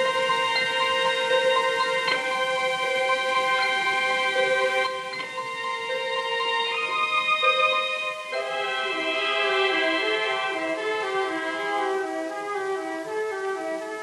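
From 4.87 s to the end, the sound drops abruptly by about 6 dB but is otherwise unchanged, most likely one channel dropping out before the mono fold-down.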